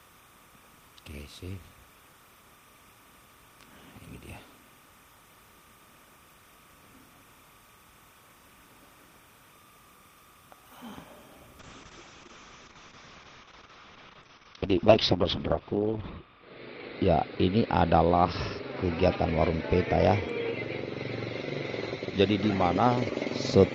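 Linear timecode leaking in from a neighbouring track or cable gives timecode bleed throughout, a steady chirping warble around 1 and 2 kHz, roughly 30 dB below the audio, consistent with 30 frames per second code. From 11.65 s to the end, a call bitrate drop sets in: the encoder was starved of bits, consistent with a fall from 32 to 6 kbps. The audio turns rough and muffled, with the top end shrinking from 20 kHz to 6 kHz, and the worst stretch lasts about 4.5 s.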